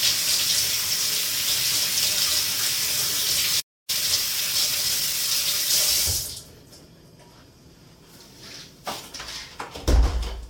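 A clip of everyday sounds. At 3.60 s the audio cuts to silence for about 284 ms, a playback stall. It resumes at 3.90 s. The likely cause is a player starved of data or a blocked audio thread. From 3.90 s to 5.78 s comes time-compressed catch-up. The sound runs about 1.15 times fast at its normal pitch. The player is trimming its backlog by cutting small pieces and cross-fading the joins. At 8.50 s a corrupt frame is decoded. A single damaged compressed frame was played despite flipped bits. Its misread values put energy at wrong frequencies, giving a brief error peaking around -30 dBFS.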